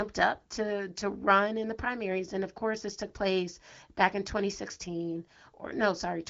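No technical faults are present.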